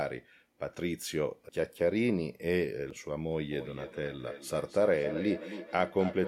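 Feedback echo between two devices starts at 3.51 s and runs to the end: a second device in the room replays the call, and the first microphone picks it up again. Speech returns about every 300 ms, thin and ringing, peaking about 10 dB below the speech.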